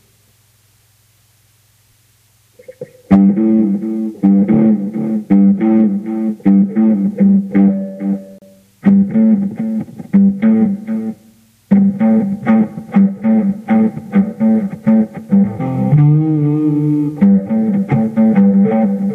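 At 8.38 s the sound drops out abruptly for about 34 ms and resumes at 8.42 s. This is a gap between stream segments: the timestamps of two consecutive pieces of the stream, which fits segments about 6 s long, fail to meet, and the player fills the hole with silence. Nothing is lost, the audio is only pushed later. A waveform shows a flat line with hard edges, and a spectrogram shows a clean vertical blank band.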